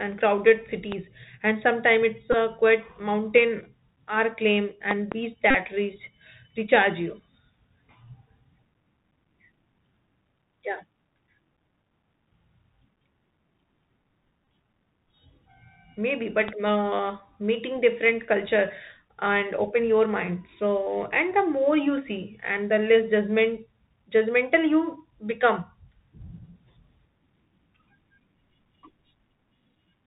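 The whole recording has passed through a Bluetooth CVSD headset codec, whose one-bit delta modulation cannot pass anything above 4 kHz and whose adaptive step lags behind loud, bright sounds. The result is plainly audible: muffled, narrowband speech, scratchy s sounds and a granular hiss underneath, consistent with a 64 kbps CVSD link.

At 0.92 s, just before "and sometimes it's", a sudden voltage step, likely from a connector, switch or static discharge, adds a loud pop about 15 dB above the speech. At 2.33 to 2.35 s the headset lost about 11 ms of voice packets and replayed the last one, so the Bluetooth headset packet repeat is heard as a brief buzz near 267 Hz. Between 4.91 and 5.14 s two more loud pops land on the speech, each about 15 dB above it. From 5.51 to 5.55 s, just before "reach recharge you", 37.5 ms of packets were lost and the repeated packet makes a short buzz near 267 Hz. 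At 14.43 to 14.47 s, 26 ms of losses are scattered across 37.5 ms, with the longest run about 20 ms, giving a broken, flickering buzz. A final loud pop comes at 16.48 s, just before "uh meeting different culture".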